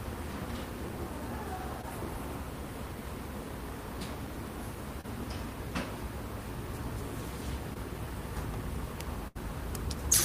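Around 1.81 to 1.85 s, 5.01 to 5.05 s and 7.74 to 7.77 s there's short concealed packet loss. Each time about 20 ms never arrived, and the decoder patched it by stretching the previous sound, so you get a quick smear or wobble.

Then at 9.27 to 9.37 s there's a burst of packet loss, about 80 ms gone in one go. The receiver held the last sound and faded it down, so it turns briefly buzzy or hissy before jumping ahead with a chunk missing.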